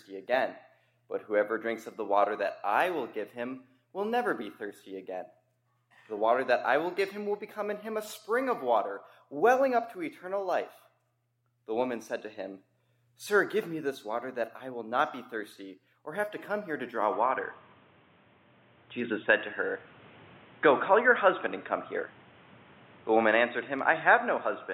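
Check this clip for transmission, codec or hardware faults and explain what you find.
One fault stands out, and it runs from 17.13 s to the end. At that moment the top of the band disappears, with nothing above 3.8 kHz, so the sound turns dull and boxy. A new background noise arrives, roughly 30 dB below the signal. The level barely moves and there is no gap at the change. This is likely an input switched to a poorer device, such as a headset's call profile, whose narrower pickup and own noise floor take over. A codec dropping to a lower bandwidth would narrow the band too, but it would not bring in a fresh background noise along with the change in tone.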